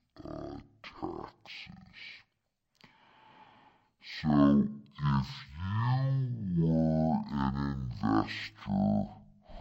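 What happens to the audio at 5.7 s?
At 5.7 s the speech is affected by the stereo read as mono fault, which runs through the whole clip rather than starting there. The left and right samples of each stereo frame are taken one after another as if they were a single channel, so every frame becomes two consecutive samples. Playback runs at 0.5x speed, and the pitch sits 12 semitones, a full octave, low. A fainter mirrored copy of the spectrum also appears in the upper half of the band.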